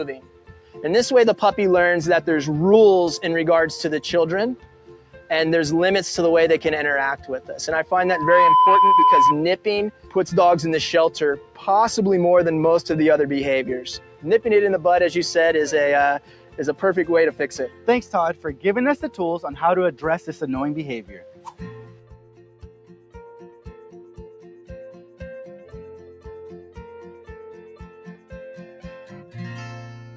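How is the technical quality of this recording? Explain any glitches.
The recording is compromised by a speech-tuned noise suppressor acting on non-speech sound, plus one burst of feedback.

A noise suppressor applied to music or sounds stays active throughout. It treats sustained content as noise, so levels pump and tails thin, with swings of roughly 10 dB.

Sound cut by the noise suppressor happens at 0.13–0.79 s, 4.56–5.30 s, 7.20–7.52 s, 9.57–10.16 s, 11.37–11.65 s, 13.99–14.25 s, 16.19–20.42 s and 21.01–29.35 s. Held or decaying sound is pulled down by about 9 to 11 dB while onsets pass.

A loudspeaker feedback squeal runs from 8.02 to 9.36 s. Speaker output re-entering the microphone builds a 1 kHz tone within half a second, reaching about 10 dB above the program.

The call microphone processing's band limit, with nothing above 8 kHz, is normal behaviour.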